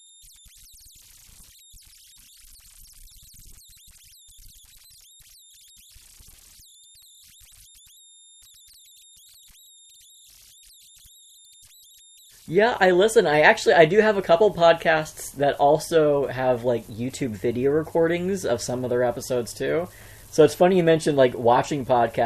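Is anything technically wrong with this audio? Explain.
Yes. Converter idle tones run through the whole clip as a faint whistle around 4 kHz, about 32 dB below the speech, most audible in the pauses and as a grainy texture under quiet passages. An undithered delta-sigma converter falls into repeating bit patterns on near-silent input, and the pattern's period sets a tone. Unlike broadband hiss, the residue is pitched, and unlike hum it sits high with no low harmonic series.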